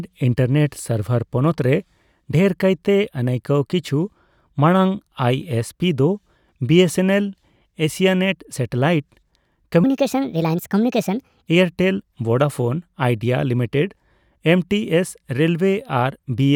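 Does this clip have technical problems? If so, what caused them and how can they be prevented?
Yes. From 9.84 to 11.48 s, just before "ᱮᱭᱟᱨ ᱴᱮᱞ ᱵᱷᱳᱰᱟᱯᱳᱱ ᱟᱭᱰᱤᱭᱟ", the speech suddenly turns hurried and squeaky, running at 1.41 times normal speed and sitting around seven semitones higher. This is a section at the wrong speed. Because speed and pitch rise together and snap back afterwards, the likely cause is that this stretch was played or resampled against the wrong clock during editing or playback. To prevent it, keep sample rates matched across the editor, files and player.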